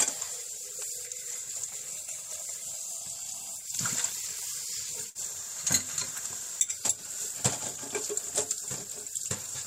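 At about 5.09 s there's a burst of packet loss. A run of data didn't arrive in time, so the receiver stretched the last bit of sound for roughly 54 ms while fading it down, then jumped ahead, skipping about 60 ms, by 5.17 s.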